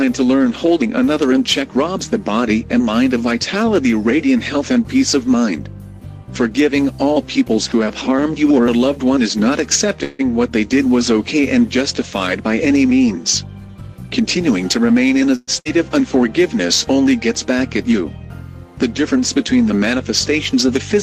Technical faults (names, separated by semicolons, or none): call audio freeze; jitter buffer speed-up; burst of packet loss